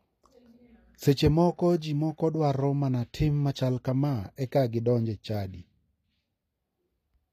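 It's a speech recording, and the whole thing carries plainly audible HE-AAC compression damage. The top end sounds synthetic. Nothing comes through above about 14.9 kHz, and the treble below that is rebuilt from copied lower bands rather than the real signal, so s sounds come across gritty and metallic. The cause is most likely a low-bitrate HE-AAC encode, with the damage pointing to something around 24 kbps.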